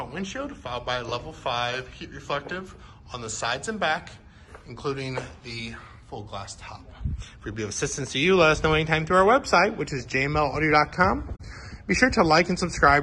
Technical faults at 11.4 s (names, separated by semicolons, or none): AAC frame loss with muting